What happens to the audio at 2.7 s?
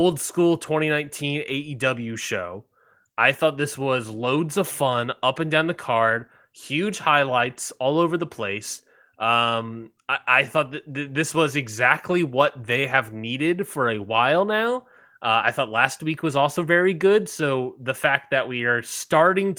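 Nothing goes wrong at 2.7 s: the speech carries on intact, with only the light, full-band shaping of the Opus voice compression it passes through.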